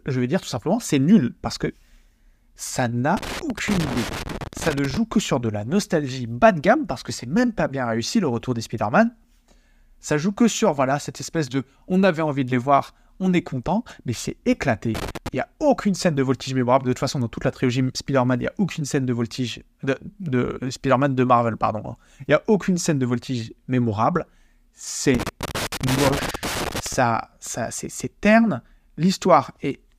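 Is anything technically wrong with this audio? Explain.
Yes, there's loose connector crackle in three spots: 3.17 to 4.97 s, just before "que sur de la"; 14.95 to 15.28 s, right after "est content mais c'est"; and 25.15 to 26.94 s. A bad contact keeps making and breaking, chopping the speech into irregular scratchy bursts.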